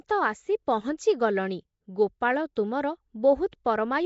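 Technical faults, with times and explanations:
Throughout, Nellymoser compression: plainly audible rough, hissy smear with nothing above 7.7 kHz, likely from the old Flash codec at a rate that fits 32 kbps; noise-filled weak bands give its grain rather than simple muffling.
2.56 and 3.52, pre-echo: a 10 ms hiss runs ahead of each sharp attack, as block-spread quantisation noise leaks into the quiet moment before, unlike a click, which lands on the attack itself.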